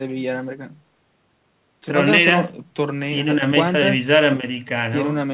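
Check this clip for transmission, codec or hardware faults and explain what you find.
No faults turn up: the speech carries the normal signature of a call link, with the call microphone processing trimming away the lowest bass and the G.711 mu-law codec at 64 kbps leaving nothing above 4 kHz.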